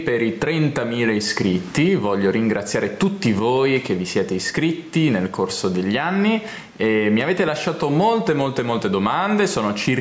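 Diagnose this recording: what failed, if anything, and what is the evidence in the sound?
Gain pumping throughout: the level ducks by roughly 15 dB under each loud sound, likely from excessive microphone gain driving a fast limiter.

Sudden gain jump at 3.39 s: sound and background drop together by about 10 dB until the end, likely an unramped digital gain change in the driver stage.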